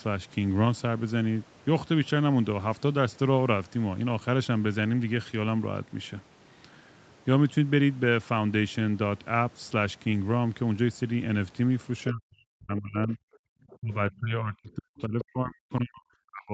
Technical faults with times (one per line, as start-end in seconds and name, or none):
12.07-12.12 other side's voice leaking through
12.11-13.19 speech suppressed in double talk
13.47-13.53 background gated by the echo canceller
13.70-13.76 other side's voice leaking through
13.81-16.54 speech suppressed in double talk
15.21-15.25 other side's voice leaking through